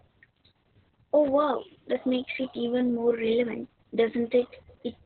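Speech, damaged throughout by Opus voice compression. Nothing reaches above about 4.3 kHz, so the speech sounds muffled and narrowband. The SILK coder's coarse excitation makes it hoarse and slightly robotic. The heavy damage suggests a very low bitrate, around 6 kbps.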